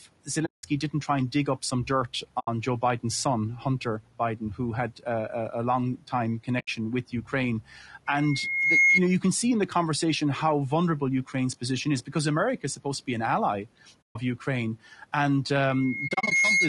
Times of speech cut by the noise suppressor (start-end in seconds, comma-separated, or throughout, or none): 7.12-7.33